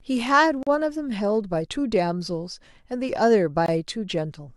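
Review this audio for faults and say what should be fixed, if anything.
Gap between stream segments at 0.63–0.67 s (about 38 ms) and 3.66–3.68 s (about 21 ms): mismatched segment timestamps leave holes the player fills with silence. These appear as flat waveform stretches and full-band blank spectrogram columns with hard edges. To prevent it, align each segment's timestamps so consecutive segments join exactly at their boundaries.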